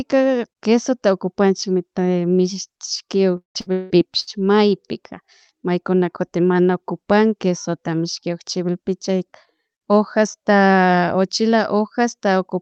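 From 3.37 s to 4.30 s there is repeated packet loss, giving a robotic sound. Four gaps fall in under a second. The longest lasts 177 ms. Each gap is filled by stretching the last received sound forward. The next gap arrives before the speech can recover. About half of this stretch is concealment rather than real audio. The speech turns choppy, with pieces missing. The call path limits the band to about 8 kHz throughout.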